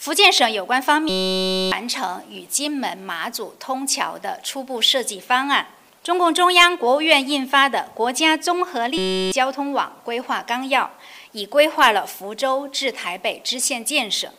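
At 1.09 to 1.72 s and again at 8.98 to 9.32 s, a system hang loop replaces the audio with a steady 188 Hz buzz. The hardware replayed one 5.33 ms slice, which fits a 256-sample buffer, while the system froze. Unlike a dropout's silence, it holds a fixed pitch, and roughly 0.7 s and 0.3 s of audio are lost.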